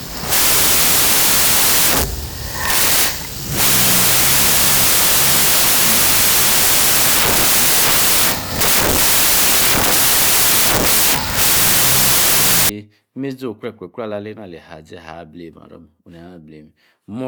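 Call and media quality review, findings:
Wrong sample width, 0.0 to 12.69 s: speech buried under loud noise, half speed, an octave low. Points to 32-bit samples read as 16-bit, probably at decode. Each splits into two values, and only the upper half carries signal.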